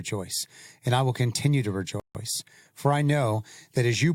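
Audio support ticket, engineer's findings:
Rebuffering stall at 2.00–2.15 s, right after "I will continue to". Speech drops to dead silence for 150 ms, then picks up exactly where it left off, with nothing skipped. Probable component: player buffer. It ran dry, waited for more data, then resumed. Adds 150 ms of gap without losing any content. Worth checking the network fetch and buffer headroom.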